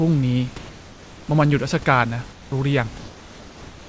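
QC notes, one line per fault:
2.32–2.52 s, comfort noise in place of the background: For 200 ms the real room noise, sitting about 22 dB below the loud parts, gives way to a flat, featureless hiss about 4 dB quieter. Its texture is gone, and the true background returns at 2.52 s. The likely cause is discontinuous transmission. The sender went quiet during a pause, and the receiver filled the gap with synthetic noise shaped roughly like the room's. The fill stays inside the call's band, ending near 8 kHz.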